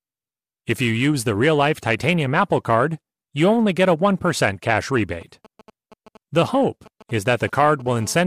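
From 4.74 to 7.82 s, a nearby 2G handset exchanging short signalling transmissions has its radio pulses rectified by the audio circuitry, producing GSM signalling bursts: a galloping dit-dit-dit of brief 217 Hz buzzes sitting roughly 25 dB under the speech.

At 7.86 s a handset in full call transmission, pulsing steadily at 217 Hz, has its rectified carrier become a continuous GSM phone buzz until 8.22 s: a hard, raspy tone rich in harmonics, about 24 dB below the speech and unrelated to it.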